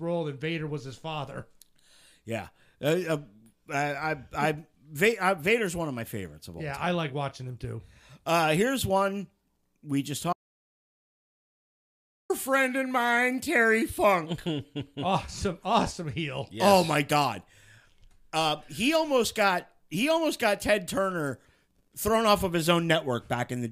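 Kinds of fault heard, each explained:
Audio dropout to silence: the speech stops abruptly after "here's one we just" at 10.33 s and returns mid-flow with "friend and mine" at 12.30 s, leaving a gap of about 2 s that is silent with no room tone at all. Whatever was said in that stretch is lost. The likely cause is that the input signal vanished, through a disconnected device, a broken link or an accidental mute, while recording carried on writing silence.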